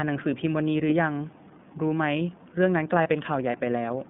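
Throughout, the speech carries the iLBC codec. The band runs only from about 150 Hz to 3.6 kHz, so a spectrogram shows a hard ceiling with nothing above, and a thin floor below. The coding damage is plainly audible: a slightly rough, synthetic grain to the voice. That fits iLBC's 30 ms frame mode at roughly 13.3 kbps, where each frame's excitation is coded on its own.

From 3.02 to 3.07 s comes a lost iLBC frame, a gap that fits a single 30 ms packet. The decoder fills it by repeating the last pitch cycle blended with noise, heard as a brief held, faintly buzzy vowel sound. On a waveform this appears as a short run of near-identical periodic cycles. The spectrogram shows flat, smeared harmonics. Normal speech resumes almost immediately afterward, because the next frame decodes independently.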